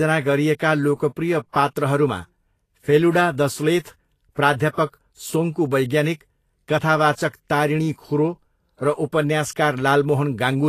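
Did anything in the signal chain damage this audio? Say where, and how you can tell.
Yes. At the codec stage there is grainy, hissy treble throughout and a flat spectrogram ceiling at 14.2 kHz, likely from Vorbis compression near 34 kbps.

Pre-echo runs from 4.32 to 4.37 s. Quantisation noise spreads back through the block, so the waveform shows 56 ms of fuzz before the attack.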